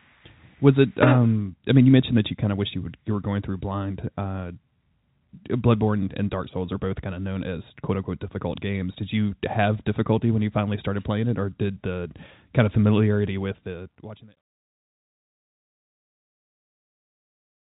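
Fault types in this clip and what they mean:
No fault types are present in this clip, so there are none whose meaning needs explaining.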